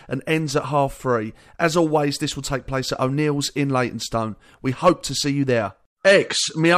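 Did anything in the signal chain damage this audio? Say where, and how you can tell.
No, nothing in the signal chain damaged this audio.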